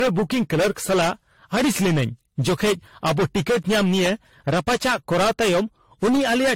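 Speech runs through the whole clip with two faults present from start to finish. The first is hard clipping. The signal is driven about 19 dB past what the stage can pass. Its peaks are sliced flat, and roughly a fifth of all samples hit that ceiling. So the fault is not confined to loud syllables. A harsh, buzzing fuzz sits on nearly every voiced sound, and the flattened tops spray harmonics high into the spectrum. The second fault is a swirly, smeared, hollow quality, with consonant attacks blurred and soft. The spectrum stops dead at 16.5 kHz. This is likely generation loss from repeated lossy coding. The smearing points to about four passes through AAC-LC at roughly 64 to 78 kbit/s. Each pass requantised on a shifted frame grid, and the noise piled up beyond what one encode at that rate would leave.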